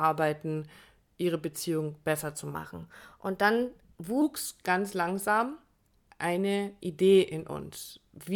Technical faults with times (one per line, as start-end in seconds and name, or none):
2.55-4.22 section at the wrong speed